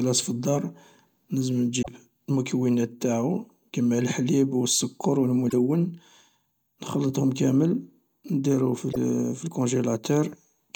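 Three quick garbled blips at 1.81–1.88 s, right before "المكونات انتاعو كما لحليب", at 5.49–5.54 s after "لحليب و السكر و", and at 8.92–8.97 s. Each jumps ahead, likely a broken MP3 bit reservoir: frames went missing and the next ones pulled leftover bytes from the wrong frame.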